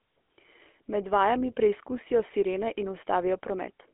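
Throughout, the speech sounds buzzy and gravelly, squeezed into 250 Hz to 3.4 kHz: the GSM full-rate codec, whose coarse pulse excitation fits 13 kbps.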